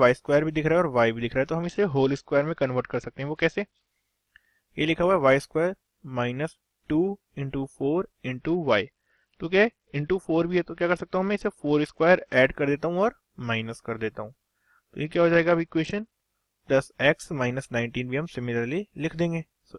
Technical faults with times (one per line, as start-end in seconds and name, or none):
1.63-3.88 Bluetooth SBC bit pool drop
8.38-12.33 Bluetooth SBC bit pool drop
15.05-16.12 Bluetooth SBC bit pool drop